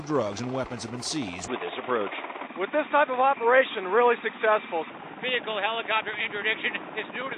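At 1.48 s the sound abruptly turns dull and boxy, with nothing above 3.8 kHz, about 5 dB level change and faint new background noise: likely an input switched to a poorer device, not mere filtering.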